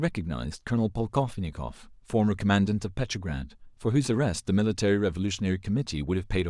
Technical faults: none

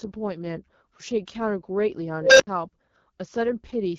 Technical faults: AMR wideband (HD Voice) codec; unstable filter

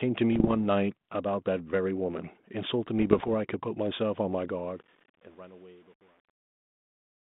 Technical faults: bit errors on an ADPCM link; truncation distortion on a fade

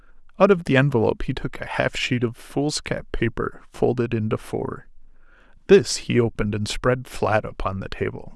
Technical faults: none

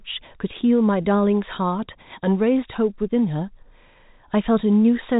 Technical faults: none

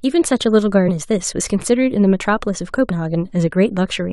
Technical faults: compressed frames skipped

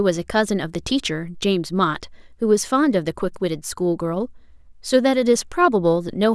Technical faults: none

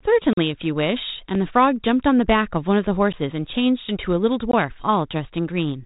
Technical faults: block of digital silence

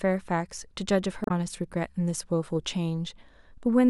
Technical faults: damaged data in a compressed stream

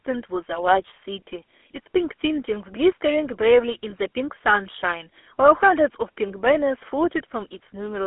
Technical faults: GSM full-rate codec; lost GSM frames

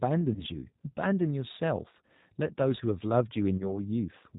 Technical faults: G.729 codec; VoIP packet loss concealed by the speech codec

